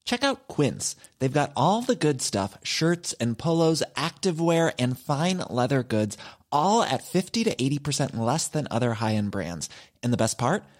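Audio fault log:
No fault is found in this speech.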